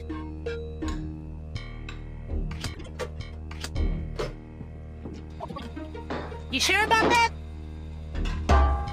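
Frames out of order at 2.74–2.88 s and again at 5.40–5.61 s: neighbouring runs swapped places, so each stretch plays halves exchanged, a garbled flutter, nothing lost.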